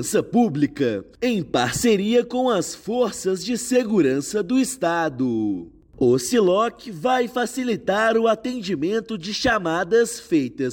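No technical faults are audible anywhere in the clip.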